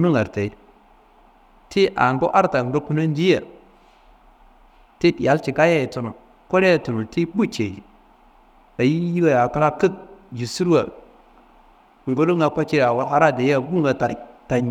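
No technical faults can be heard anywhere in the recording.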